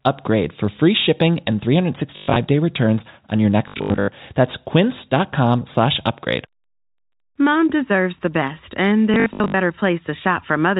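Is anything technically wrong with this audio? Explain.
Yes. Packet loss with last packet repeated occurs at 2.16 to 2.36 s, 3.68 to 4.08 s and 9.14 to 9.54 s. In each window the receiver replays the last good packet until fresh ones arrive. The repeats ignore the pitch cycle, and the longer runs, up to 120 ms, buzz at about 50 Hz, which fits 20 ms packets. The result is a robotic stutter rather than silent dropouts. The narrow telephone band of the G.711 path is heard throughout.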